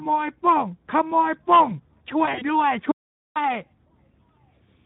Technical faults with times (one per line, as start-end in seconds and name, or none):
0.00-4.86 Speex codec
2.25-2.45 VoIP packet loss concealed by the speech codec
2.91-3.36 audio dropout to silence